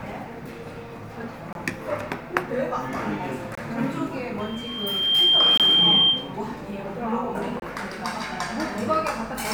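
At 1.53 to 1.55 s, 3.55 to 3.58 s, 5.57 to 5.60 s and 7.60 to 7.62 s there is a gap between chunks. The audio was delivered in 2.0 s blocks, and each next block started about 23 ms late, leaving silence at every join. Each hole arrives on a steady two-second rhythm. Unlike a dropout, nothing is missing: the sound picks up exactly where it stopped, just delayed.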